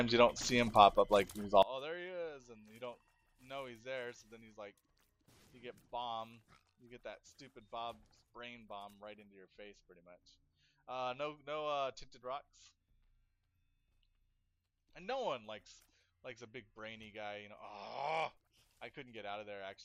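From 1.63 s to the end, the audio collapses by about 23 dB, with the centre nearly gone while only a faint residue remains. This is one channel inverted, likely a polarity reversal on one side, so the shared content cancels when the two channels are combined. Unlike a plain gain drop, which would leave the balance intact, it removes the middle selectively and leaves only the channel differences.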